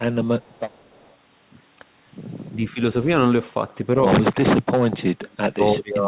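From 0.41 to 1.12 s a faint delayed copy of the speech trails the original by about 0.3 s, very low, roughly 35 dB under it. This echo leak is likely a far-end speakerphone whose echo canceller let residue back. The separate repeat sets it apart from room reverberation.

At 2.48 to 2.8 s the speech dips by roughly 20 dB, for about 0.2 s in all, then briefly again at 4.32 to 4.42 s, by about 25 dB. From 4.6 s to the end it is held down by as much as 35 dB. This is speech suppressed in double talk, likely the canceller attenuating the talker while the other side spoke. Unlike packet loss, the level is ducked rather than broken by glitches. Throughout, the narrowband call path leaves nothing above 4 kHz.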